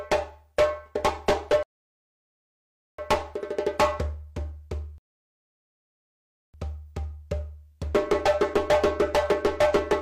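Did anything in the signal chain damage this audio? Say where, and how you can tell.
Yes. Two rebuffering stalls, a fault at the network and playback buffer stage. The audio drops to silence from 1.63 to 2.99 s, adding about 1.36 s. It happens again from 4.98 to 6.54 s, adding about 1.56 s. Each time the sound picks up exactly where it stopped. Nothing is skipped or repeated. The player drained its downloaded audio and waited for more data. The gaps add time without removing content.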